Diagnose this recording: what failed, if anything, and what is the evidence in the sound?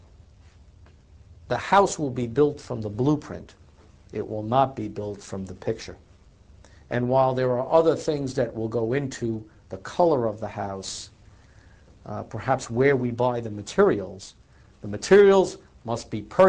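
Nothing in the recording points to a failure at any stage of the chain. No event stands out that would need a time or a mechanism to explain it.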